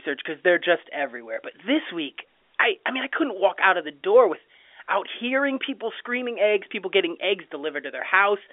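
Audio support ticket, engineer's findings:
Findings: no fault found; speech carried over G.711 A-law telephone coding at 64 kbps within the 300 Hz to 3.5 kHz line band.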